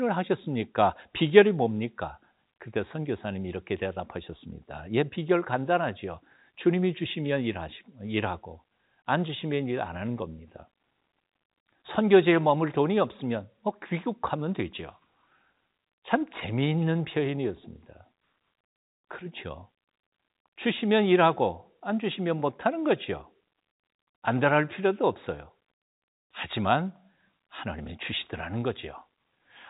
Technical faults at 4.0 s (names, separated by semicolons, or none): none